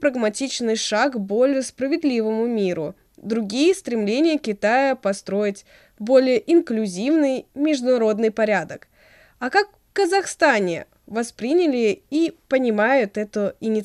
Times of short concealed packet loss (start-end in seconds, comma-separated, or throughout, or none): none